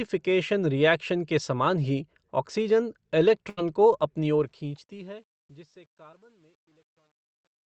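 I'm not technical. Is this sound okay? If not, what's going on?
No. A burst of packet loss at 3.49 to 3.59 s: a run of the call's data never arrived. The receiver stretched out the last bit of speech for most of that gap and let it fade, so you hear a brief held buzz or hiss. Then the talk jumps ahead, with a short piece missing.

Truncation distortion on the fade runs from 4.22 s to the end. As the speech fades out from around 4 s, the volume change is done with too little precision, so quiet sounds turn coarse and stepped. From about 5.25 s the tail sounds gritty.

A short concealed packet loss at 6.11 to 6.15 s: a tiny slice of the call arrived too late. The receiver patched the hole by continuing the previous sound and blending back in, which you hear as a quick smear or wobble.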